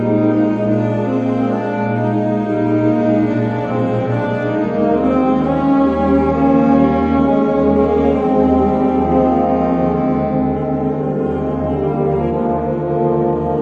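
No technical faults are audible.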